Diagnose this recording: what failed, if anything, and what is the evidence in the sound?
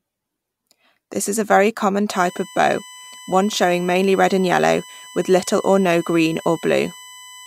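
USB whine from 2.1 s, after "is a very common", to the end: a fixed 1 kHz tone strongest at 3 kHz, well below the speech, from bus current leaking into the analogue ground.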